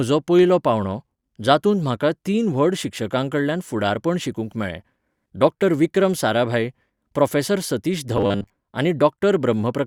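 From 8.17 to 8.50 s the speech turns into robotic sound from repeated short buffers: a rigid, metallic buzz with a fixed pitch of 100 Hz that only loosely tracks the words. New audio was likely arriving too slowly, so roughly 70% of that stretch is a 10 ms fragment played over and over. Unlike a stutter, where repeats are long enough to hear as separate chunks, these are so short they fuse into a steady tone.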